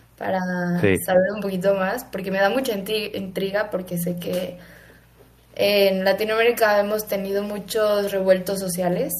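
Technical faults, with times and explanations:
1.12–1.37 s, speech suppressed in double talk: speech dips by about 10 dB for roughly 200 ms, likely an echo canceller attenuating the talker during simultaneous far-end speech.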